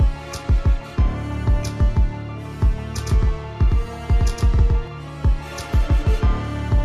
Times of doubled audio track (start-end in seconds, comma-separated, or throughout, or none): 2.98-4.88